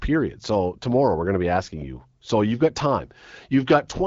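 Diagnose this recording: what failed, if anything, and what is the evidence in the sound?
Nothing has failed in this speech recording: it carries the band-limited character of the AMR wideband (HD Voice) codec at 12.65 kbit/s, with only light coding texture and no content above about 7.6 kHz, which is what that path normally delivers.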